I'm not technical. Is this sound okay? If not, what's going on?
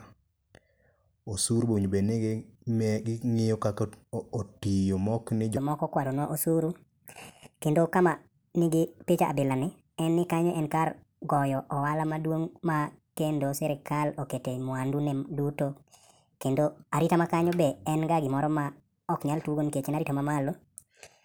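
No. From 5.57 s to the end there is a section at the wrong speed. Right after "kaka otiyo mokni", the speech suddenly runs about 1.42 times faster than normal, so it sounds rushed and chipmunk-like, with voices raised by roughly seven semitones. Speed and pitch jump together because that stretch is being played back too quickly, most likely because an editor or player ran that part on the wrong clock.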